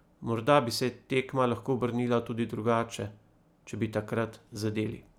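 No technical faults detected anywhere in the speech recording.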